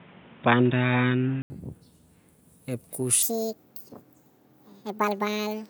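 From 0 to 1.5 s the speech sounds dull and boxy, with a different background hiss sitting well below the speech, and a noticeable level step where it changes. That points to an input switched to a poorer device, likely a fallback microphone or headset call profile, before the main input takes over after a brief 80 ms gap. On a spectrogram the upper band is empty until 1.5 s, where a short blank column marks the switch.

From 3.23 s to the end, the section plays at the wrong speed, running 1.69 times too fast. The speech becomes hurried and chipmunk-like, raised by nearly an octave, because speed and pitch rise together. The likely cause is playback or an edit referenced to a mismatched clock. On a spectrogram the harmonics jump sharply upward at 3.23 s and sit farther apart. On the waveform, syllables and pauses are visibly compressed in time.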